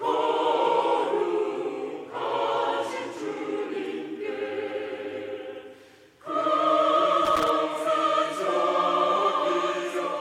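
At 7.25 s a burst of loose connector crackle runs until about 7.49 s, roughly a quarter of a second of ragged scratching. A worn or dirty contact is making and breaking as it shifts, so the signal is chopped on and off at uneven moments, with small pops where any DC on the line jumps. Its irregular, clustered texture separates it from digital clicks, which arrive as isolated, sharply defined ticks.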